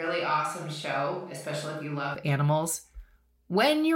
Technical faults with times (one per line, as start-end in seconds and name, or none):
0.00-2.15 switch to a distant microphone